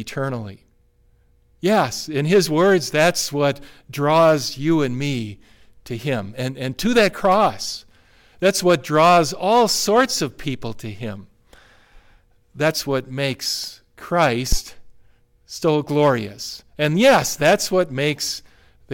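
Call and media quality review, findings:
Phantom power thump at 14.52–14.59 s: low thud peaking near about -6 dBFS, 15 ms decay. Supply switched on live input; DC step through coupling capacitors.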